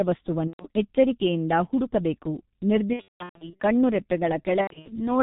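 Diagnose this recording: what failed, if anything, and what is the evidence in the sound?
The codec stage is at fault: the speech was carried by the G.723.1 codec, and the heavy damage fits a rate near 6.3 kbit/s. Throughout, nothing survives above 4 kHz, so the voice is muffled and hoarse, with smeared consonants from the slow-updating 30 ms frame model.

The network stage dropped packets, and the VoIP packet loss was concealed by the speech codec. At 0.47–0.66 s, just before "ಎಚ್ಚರಿಕೆಯಿಂದ ಹುಡುಕಬೇಕು", about 120 ms goes missing. At 2.93–3.62 s, 450 ms is lost in bursts up to 180 ms long, and at 4.61–5.11 s, 180 ms is lost in bursts up to 90 ms. Each time the decoder extrapolates its last pitch and filter, turning speech into a fading buzzy tone or coloured noise, and it recovers weakly afterwards.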